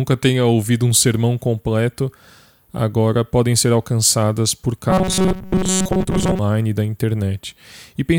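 From 4.90 to 6.39 s, after "podem ser alcançadas por" and until "e da", the speech becomes a rigid metallic buzz at 188 Hz. This robotic sound likely comes from repeated short buffers of about 5.3 ms filling most of the span while real audio is skipped.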